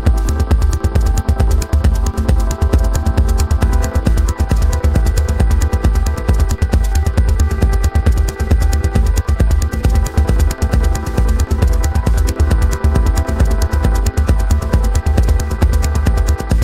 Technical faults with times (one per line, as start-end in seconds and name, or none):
none